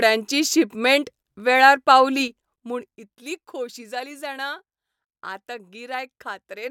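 From 2.13 to 3.58 s, between "शिपमेंट वेळार" and "जाली जाणा", a ticking zipper noise rides on the speech as it drops by roughly 15 dB. The cut is applied in unsmoothed 3 dB steps, about four a second, each leaving a small click.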